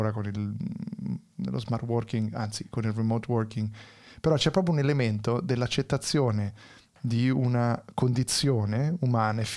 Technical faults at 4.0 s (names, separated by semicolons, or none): none